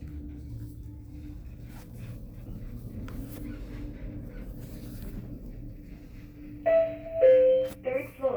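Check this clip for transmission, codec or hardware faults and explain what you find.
Nothing stood out on listening to this clip.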